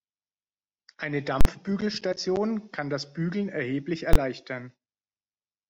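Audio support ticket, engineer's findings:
Loud pop, dead gap, second pop at 1.41 to 1.45 s: invalid numbers at full scale. A DSP stage produced infinite or invalid values that were clamped to maximum output for 43 ms, which fits a 2048-sample processing block. A shorter repeat at 4.13 to 4.16 s, 21 ms, fitting a 1024-sample block, lands closer to a single bang.

Brief glitch at 2.10 to 2.13 s: damaged data in a compressed stream. Corrupt bytes made the decoder misread frames there, lose sync and jump ahead to the next valid frame header.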